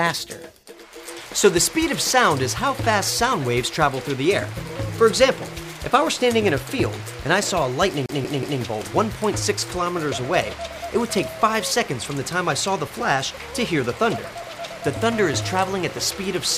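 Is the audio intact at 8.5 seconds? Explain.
No. At 8.5 seconds the audio is caught in a CD stuck on one turn. From 8.06 to 8.61 s, the same 0.18 s slice plays three times over. A scratch makes the laser jump back one track at the same point on each rotation. Each jump leaves a brief mute. The result is a fast, even stutter, the familiar sound of a skipping CD, before playback moves on.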